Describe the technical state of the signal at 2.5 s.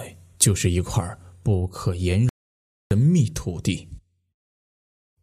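At 2.5 s the output is silent. It sits inside a playback stall running from 2.29 s to 2.91 s, a gap of about 0.62 s. The sound cuts off in mid-flow at 2.29 s. Nothing comes out for over half a second. Then the audio picks up again at 2.91 s. The likely cause is a player that ran out of buffered data or had its thread blocked. It could not feed the output until it recovered.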